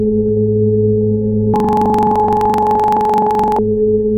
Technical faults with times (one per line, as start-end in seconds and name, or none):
1.54-3.59 planar audio read as interleaved